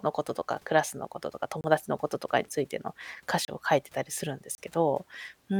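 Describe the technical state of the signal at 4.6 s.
Just before 4.6 s, from 4.55 to 4.58 s, the speech drops out in a block of digital silence about 30 ms long. The span is silent, and the signal cuts in and out with no fade, so the whole event is heard as a short hole. Unlike a dropout smoothed by concealment or a fade, the gap is silent and abrupt at both ends.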